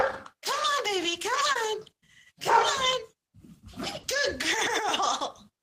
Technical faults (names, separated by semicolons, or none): short concealed packet loss